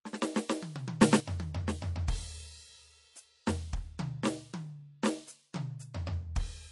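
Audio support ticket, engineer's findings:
MP3 compression, whole clip: plainly audible codec damage in the music, watery and swirly texture, metallic chirps on bright content, smeared attacks. Nothing above 11.3 kHz. Likely cause is a low-bitrate MP3 encode, fitting roughly 48 kbps. Short of bits, the encoder zeroes weak frequency lines that flicker on and off frame to frame and applies a fixed treble cutoff.

Sudden gain jump, 1.02 to 1.20 s: level steps by about 10 dB with no ramp, music and background noise moving together, then returns. Likely cause is a digital gain stage changing value between adjacent samples, such as a setting change or bit shift applied instantly rather than faded.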